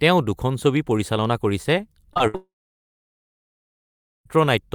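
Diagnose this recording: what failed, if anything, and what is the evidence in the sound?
The trouble is on the network side, starting right after "পৰিচালনা কৰিছে". First come two short concealed packet losses back to back, at 2.13 to 2.18 s and 2.18 to 2.21 s. Each is about 20 ms of audio that never arrived and was patched by extending the preceding sound. You hear a quick smear or wobble rather than a clean gap.

Then there's a burst of packet loss from 2.27 to 2.36 s, about 60 ms of missing audio in one run. The decoder keeps the last sound going and pulls the level down as the hole lengthens, so you get a brief held buzz or fading hiss. When real audio returns, the slice that belonged in that gap simply isn't there.

Straight after that, at 2.36 s, the audio goes away until 4.27 s, nearly 1.9 s with nothing real in it. Concealment carries the last sound for a short while as a decaying tail. 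For about the last 1.77 s there's just silence. When the sound resumes, everything from that stretch is gone. The likely cause is a long network dropout, with no packets getting through for the whole span.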